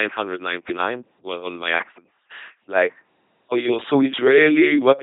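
Speech throughout shows LPC-10 vocoder damage at 2.4 kbit/s: a buzzing, mechanical robot quality from pulse-or-noise excitation, with nothing above 3.8 kHz.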